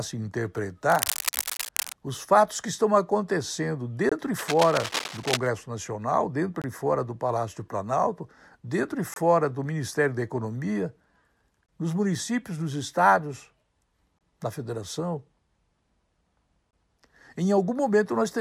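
From 0.87 to 1.93 s a burst of cable scratch noise sits over the speech: dense, irregular crackle and rustle at about 5 dB below the speech level. This is likely a worn cable, connector or control being moved, with its contact resistance fluctuating rapidly. Within that span, at 1.57 s, comes the first gap between chunks, a 23 ms hole with abrupt edges just before "os fatos que estão". Further gaps follow at 4.09, 6.62, 9.14, 11.66 (before "nos municípios nos estados"), 14.19 (before "na federação") and 16.71 s. They are spaced about 2.5 s apart, which points to audio delivered in 2.5 s blocks with a short stretch of silence inserted at each join, from padding or late chunk start-up. Nothing is dropped, but the flow is regularly chopped. The second scratch burst runs from 4.38 to 5.47 s, again at about 5 dB below the speech, with the same gritty, uneven texture.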